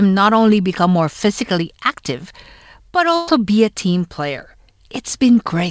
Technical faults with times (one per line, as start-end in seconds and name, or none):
3.16-3.29 burst of packet loss